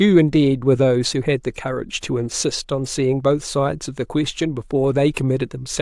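No technical faults can be heard anywhere in the speech, with the signal holding steady and continuous throughout.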